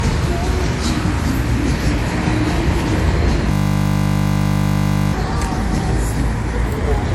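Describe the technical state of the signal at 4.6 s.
At 4.6 s the audio is caught in a system hang loop running from 3.52 to 5.13 s. A frozen system replays one 20 ms buffer, giving a steady 50 Hz buzz.

Transcoding between lossy codecs also colours this moment. Nothing sounds above 16.6 kHz. Mixed artefacts likely point to WMA at low bitrate, then MP3.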